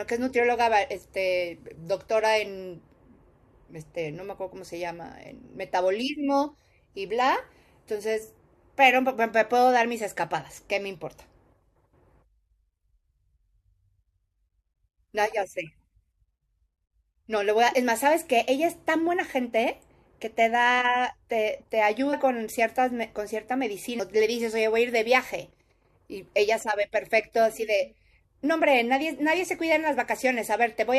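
At 22.12 to 22.14 s the speech jumps forward by about a tenth of a second, and at 24.0 s by roughly three tenths of a second. Both are compressed frames skipped: whole coded frames were missing or rejected by the decoder, so playback resumes further on. The gaps point to a handful of frames lost in the first case and more than a dozen in the second.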